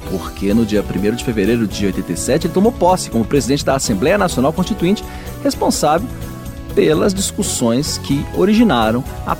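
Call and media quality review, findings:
No faults found in this clip. Nothing to log against any component.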